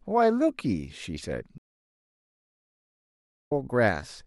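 A stream reconnect interrupts this speech clip: at 1.58 s the connection drops and the player falls silent for about 1.9 s, until 3.53 s, while it re-establishes the link and starts a new decoder partway through the stream. When sound returns, it picks up at a later point, roughly a second and a half further on, so that stretch of speech is skipped, and the first moment after the gap comes in muted or fading up.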